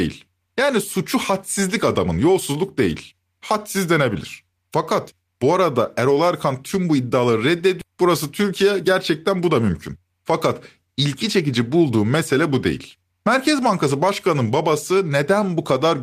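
At 7.81 s a skip ahead drops roughly 400 ms of speech. The two sides are joined directly, with no silence, unlike a dropout, which leaves an audible gap. From 8.43 to 8.95 s a jitter buffer speed-up trims short pitch-period pieces, about 50 ms in total, so the speech runs at 108% speed and sounds hurried while its pitch stays unchanged, unlike a resampling error.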